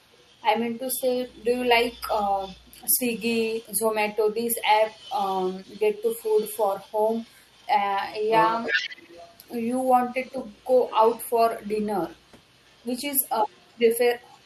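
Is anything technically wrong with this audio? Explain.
Yes, there are two faults.

From the start to 7.67 s, and again from 8.21 s to the end, there is an echo leak. A faint copy of the speech trails it by 358 ms, about 25 dB down. The likely cause is a far-end loudspeaker whose echo canceller let residual pickup return. A spectrogram shows weak, delayed ghosts of each syllable's harmonics.

Between 8.72 and 8.83 s, speech is suppressed in double talk. For roughly 100 ms the level dips by around 10 dB, likely because the echo canceller heard both sides at once and attenuated everything. The waveform shows a brief notch in the envelope, and the spectrogram shows a short faded band.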